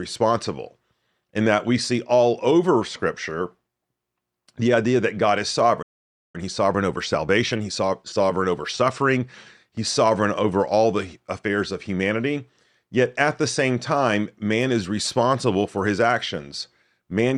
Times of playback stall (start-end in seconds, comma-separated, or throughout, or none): 5.82-6.36